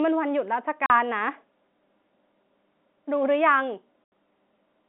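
At about 0.86 s the speech drops out for 40 ms, and again at 4.04 s for 80 ms. That's packet loss filled with silence: the receiver just played nothing where packets went missing, so you get clean-edged holes. The two gaps fit 20 ms packets, two missing and then four. The G.711 telephone band carries it, capped below 4 kHz.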